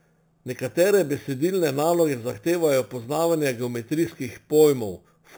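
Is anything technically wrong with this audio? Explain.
Yes, there's imaging from sample-and-hold upsampling throughout. It sounds like 8 kHz audio raised to 48 kHz by repeating samples, leaving a metallic fizz from 4 to 8 kHz about 18 dB down.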